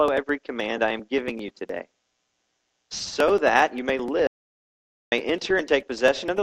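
From 4.27 s to 5.12 s the sound stops dead and the gap is silent for about 0.85 s before it resumes mid-flow. This is an audio dropout to silence, and the likely cause is that the input was lost briefly while recording carried on writing silence. What sets it apart from a gate or a quiet pause is that no room tone or noise floor survives in the gap. The cut is abrupt at both edges, and whatever sounded in that stretch is gone.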